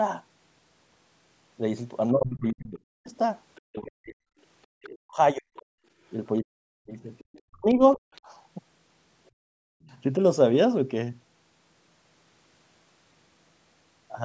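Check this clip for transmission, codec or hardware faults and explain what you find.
The clip shows echo-canceller trouble on a call rather than codec or line damage. The talker is pushed down during double talk, the far-end voice bleeds through, and the room tone is briefly gated. The spectrum, which stops at 8 kHz, reflects normal call processing.

Speech suppressed in double talk, from 2.11 to 8.02 s and again from 9.64 to 10.2 s: the talker's voice sinks in pieces, losing its top end and at times nearly vanishing, with drops of roughly 40 dB. Across the first stretch about three seconds in all are affected. The likely cause is the canceller failing to tell the near talker from loudspeaker echo while both were active, so it attenuated everything. On a waveform the envelope collapses in ragged chunks. A spectrogram shows the harmonics thinning from the top down, then gaps.

Other side's voice leaking through, at 3.55 to 3.61 s, 4.82 to 5.63 s and 7.18 to 8.21 s: a faint second voice sits under the talker. 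It is a brief scrap about 35 dB below the main speech first, then longer passages around 25 to 30 dB below. The likely cause is incomplete echo removal of the loudspeaker signal picked up by the microphone. A spectrogram shows weak, separate harmonic traces running independently of the talker's pitch.

Background gated by the echo canceller, at 5.8 to 5.86 s and 9.31 to 9.36 s: the room tone dips abruptly for roughly 70 ms and then 50 ms, by about 21 dB and about 24 dB, then returns. The canceller clamped the microphone hard while the loudspeaker played and released it quickly afterwards. On a waveform the noise floor shows short notches. A spectrogram shows narrow vertical bands where the background fades across all frequencies at once.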